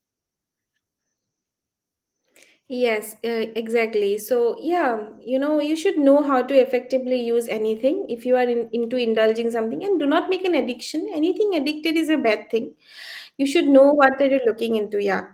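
Nothing in this speech recording stood out as a fault on listening.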